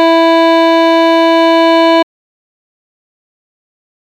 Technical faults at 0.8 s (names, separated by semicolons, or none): none